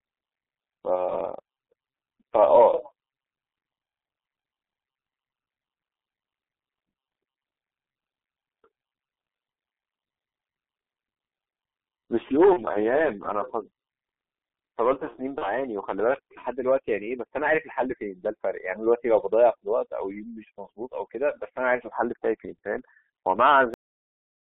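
Throughout, the speech passes through a G.723.1 codec whose low bitrate, consistent with about 6.3 kbit/s, and 250 Hz to 3.5 kHz band leave it heavily muffled and hoarse, with smeared consonants. VoIP packet loss concealed by the speech codec strikes three times, at 0.95 to 1.09 s, 12.53 to 12.61 s and 15.38 to 15.54 s. Each gap fits one missing 30 ms frame, which the decoder fills by extrapolating, producing a brief fading smear before the speech recovers. At 23.74 s a cut-off end halts playback mid-sound, dropping abruptly into digital silence with no natural decay.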